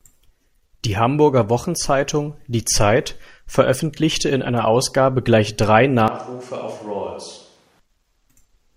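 Right after "gleich drei", at 6.08 s, the voice suddenly turns hollow and roomy, loses its low end, drops by roughly 10 dB, and sits in more audible background noise, about 30 dB below the speech. At 7.80 s it snaps back to its close, full sound. The abrupt change in both directions is the signature of a switch to a distant microphone, likely because the close microphone dropped out and a farther one, such as a camera's, filled in.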